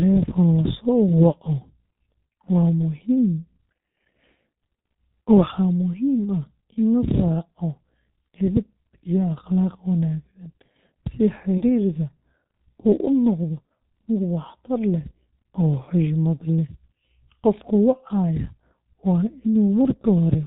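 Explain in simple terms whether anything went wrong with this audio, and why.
The whole recording has passed through the G.723.1 codec, an early internet-phone format that squeezes sound into very little data. It keeps nothing above 4 kHz and tracks the voice coarsely, so the speech sounds heavily muffled and hoarse, with smeared consonants throughout.

From 11.58 to 11.64 s there is VoIP packet loss concealed by the speech codec. A gap of about 30 ms, which fits one lost frame, was filled by the decoder stretching the preceding sound into a brief fading patch of buzz or noise.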